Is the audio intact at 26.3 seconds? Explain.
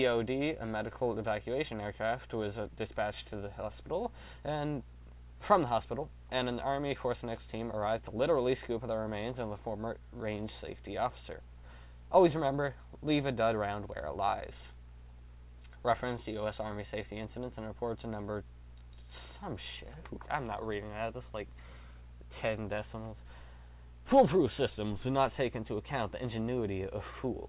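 Yes, the audio at 26.3 seconds is intact, with no dropout, glitch or other fault at that point.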